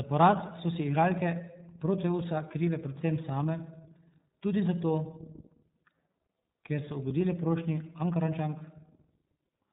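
Right through the speech you can hear the iLBC codec: nothing above 4 kHz, a rough, slightly synthetic edge, fitting 30 ms frames at around 13.3 kbps.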